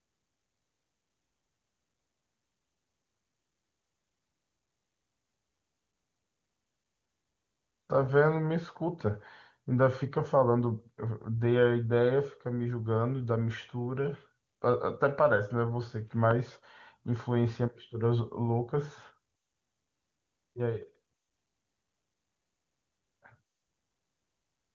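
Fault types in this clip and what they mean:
No faults can be heard in this speech recording.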